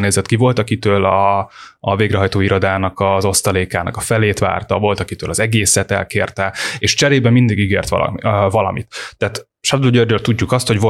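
No technical faults are audible anywhere in the speech recording.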